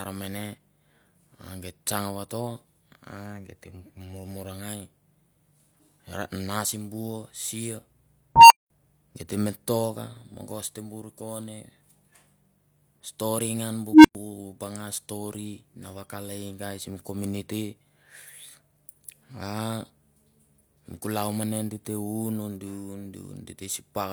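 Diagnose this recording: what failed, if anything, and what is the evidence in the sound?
A tone swells at 8.36 s (around 1 kHz, over 145 ms) and at 13.92 s after "stori ngan bu" (around 300 Hz, 121 ms). Each cuts to silence for 200 ms and 105 ms, before "geit te me toka" and "banga stori na vakale". This is an unstable filter in the processing stage: a recursive filter's output grew without limit, overflowed, then muted until reset.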